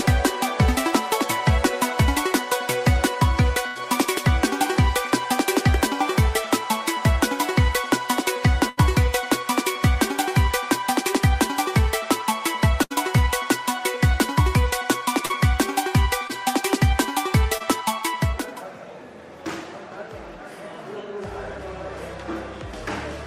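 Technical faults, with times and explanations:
3.67–3.77 s, 8.69–8.79 s and 12.83–12.92 s, burst of packet loss: each time the sound stalls into a sustained tone or hiss that fades before the audio picks up again a little further along, with a piece skipped. About 80 ms of the stream never arrived in time at each point. The receiver covered each hole by extending the last thing it had heard and turning it down, then jumped ahead to the next audio that did arrive.
15.25–15.31 s, 16.27–16.31 s and 17.57–17.62 s, short concealed packet loss: these are brief smears or wobbles, where a fleeting detail of the sound can blur away. Far less went missing here: about 40 ms at 15.25 s and about 20 ms at each of the other two. The decoder patched each gap by carrying the preceding sound forward, by its pitch or as shaped noise, and blended back into the real signal.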